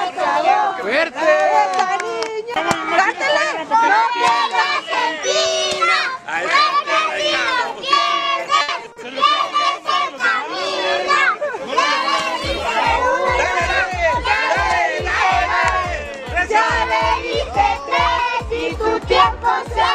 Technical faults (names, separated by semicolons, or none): repeated packet loss (robotic sound); call bitrate drop